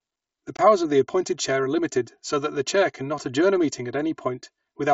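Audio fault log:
Throughout: channel delay (comb filtering). One channel arrives around 3 ms behind the other before the two are summed to mono. Shared content cancels at evenly spaced frequencies, the first notch near 150 Hz, so the speech sounds hollow and phasey with fixed spectral dips.
0.57–0.59 s: unconcealed Bluetooth headset packet loss. The speech breaks into an abrupt hole of about 22.5 ms, which fits three lost headset frames filled with silence instead of concealment. The hard edges of the gap give a short, sharp interruption in the wideband mSBC signal.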